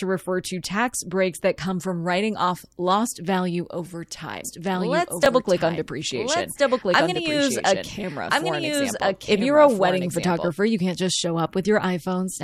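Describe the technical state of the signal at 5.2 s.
At 5.2 s a doubled audio track runs from 4.45 to 10.49 s: a full-band copy of the speech, about as loud as the original, trails it by about one and a half seconds, likely from a second, slower capture path. From 5.23 to 5.26 s, chunks out of order: a 10 ms chunk plays two chunks late, leaving hard joins and a brief jumbled moment.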